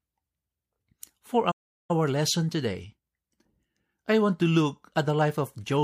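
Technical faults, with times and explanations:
1.51–1.91 s, playback stall: the speech halts mid-flow into clean silence for about 0.38 s, likely because the player was starved of data, unlike a brief click-like dropout.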